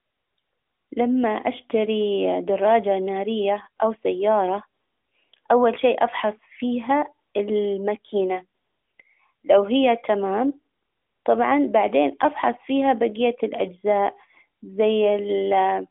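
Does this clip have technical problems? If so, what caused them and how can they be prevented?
No, this clip has no technical problems, so there is nothing to prevent.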